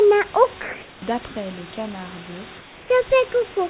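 Comfort noise in place of the background appears in three pauses: 0.62 to 1.02 s, 1.28 to 1.36 s, and 2.58 to 2.90 s. The room noise, which sits roughly 23 to 26 dB below the loud speech, is replaced by a steady, featureless hiss with no texture. The first stretch is about 3 dB louder than the real background, the second matches it, and the third is about 3 dB quieter. The likely cause is discontinuous transmission, with the receiver synthesising noise during silence. The band stays limited to 4 kHz throughout.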